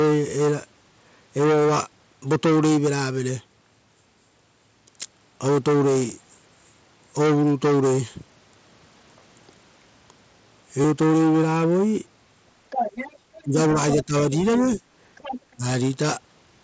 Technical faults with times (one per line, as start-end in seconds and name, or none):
5.99 concealed Bluetooth headset packet loss
10.82-10.84 concealed Bluetooth headset packet loss
12.70-13.43 other side's voice leaking through
13.42-13.56 speech suppressed in double talk
13.96-14.13 speech suppressed in double talk
15.16-15.41 other side's voice leaking through
15.56-15.64 speech suppressed in double talk